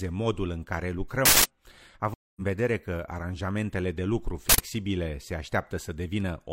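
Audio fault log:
1.25–1.44 s and 4.49–4.59 s, uninitialised buffer: two short, loud bursts of digital noise, lasting 186 ms and 93 ms, where a block was played before any audio had been written into it, so leftover memory came out as samples. The lengths fit 8192- and 4096-sample buffers.
2.14–2.42 s, stream reconnect: the connection dropped and playback fell silent for 222 ms. A fresh decoder then picked up mid-stream, so the sound resumes about 0.2 s further on than where it broke off, and that stretch is simply missing.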